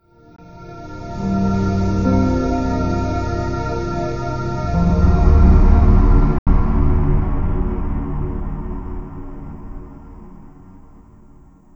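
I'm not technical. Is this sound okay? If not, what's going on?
No, there are two short gaps where the sound just cuts out and then picks up further along, as if it kept playing without you. That's a Bluetooth dropout, likely from wireless packets arriving too late: a tiny 20 ms blip at 0.36 to 0.39 s, and a longer 80 ms hole at 6.38 to 6.47 s.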